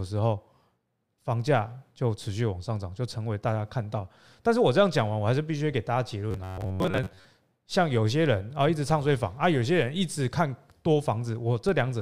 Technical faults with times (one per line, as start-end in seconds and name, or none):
6.31-7.25 robotic sound from repeated short buffers
8.90 DC step
11.69 DC step